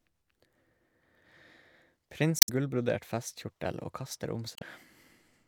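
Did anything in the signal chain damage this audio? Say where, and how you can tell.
Yes. Damaged data in a compressed stream at the codec stage: brief glitches at 2.39 to 2.49 s and 4.54 to 4.62 s, where the decoder loses sync and hunts for the next frame.

Playback buffer: a repeated buffer at 3.73 s, a tiny buzzy stutter where a roughly 5.3 ms chunk, fitting a 256-sample buffer, plays two extra times, with essentially nothing lost.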